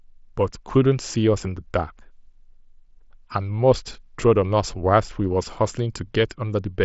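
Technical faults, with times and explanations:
No technical faults detected.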